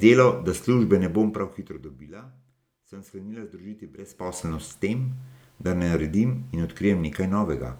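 Right after "sem sklenila združiti", from 3.98 to 4.42 s, there's zipper noise. The level shifts by around 20 dB in 1 dB steps, about fifty a second, with no smoothing, so each jump clicks and you hear a ticking zip riding on the speech.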